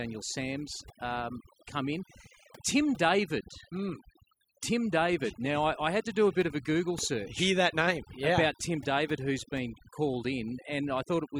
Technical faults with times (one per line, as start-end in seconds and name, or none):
0.00-11.39 overdone noise removal